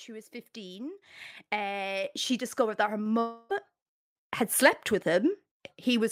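Microphone volume stepped up at 1.02 s, just before "uh she discovered that", and again at 2.04 s, before "she discovered that her". Each time the call software judged the input too quiet and raised the device gain in one jump, about 9 dB and then about 4 dB, so voice and background get louder together.

Long network dropout from 3.19 to 3.52 s, right after "she discovered that her". About 0.3 s of audio likely never arrived, and the receiver stretched the last sound into a fading buzzy tail across the gap. Speech then resumes with that stretch missing.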